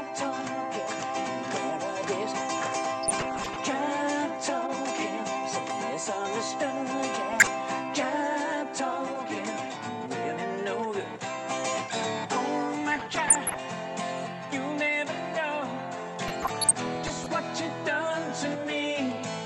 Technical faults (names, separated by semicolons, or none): DAB burbling